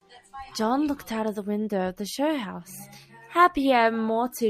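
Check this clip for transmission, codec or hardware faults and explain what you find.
No faults detected here.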